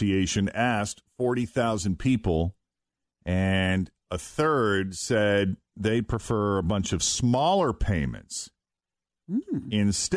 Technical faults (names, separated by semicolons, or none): none